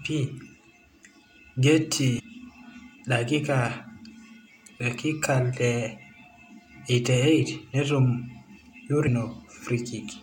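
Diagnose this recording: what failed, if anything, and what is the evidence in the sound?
The compressed stream feeding the codec carries damaged data in two places: some bytes in the encoded file or stream are corrupt, so the decoder cannot parse those frames cleanly and has to resynchronise on the next valid frame header. In the sound, this appears as two brief, abrupt blips cutting into the speech, one from 2.18 to 2.21 s and a shorter one at 9.06 s. Each is too short and isolated to be a network dropout pattern.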